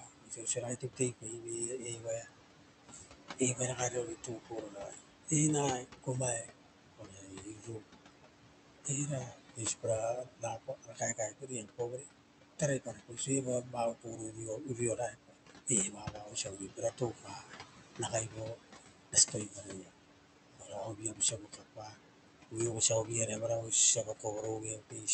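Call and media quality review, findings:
Noise suppressor artifacts, whole clip. Background drops about 18 dB between phrases and rises again under speech. The suppressor gates room noise, about 13 dB below speech, band by band and frame by frame.

Speech cut by the noise suppressor, 0.0–8.15 s, 8.84–19.94 s, 20.53–25.13 s. Soft consonants and word endings are swallowed. Roughly 4 s, then about 5 s, of speech is affected. Dips reach about 18 dB, later about 17 dB. The suppressor is treating quiet speech as noise.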